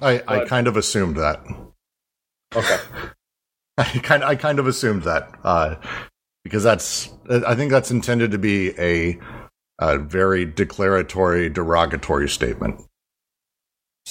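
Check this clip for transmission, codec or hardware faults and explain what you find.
No faults are audible anywhere in this speech recording.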